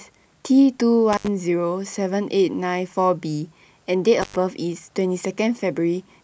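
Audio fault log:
1.13 to 1.28 s and 4.22 to 4.36 s, intermittent contact: a loose connection briefly opens for about 76 ms and 101 ms, leaving crackle at each edge and faint hiss between, unlike a clean digital dropout.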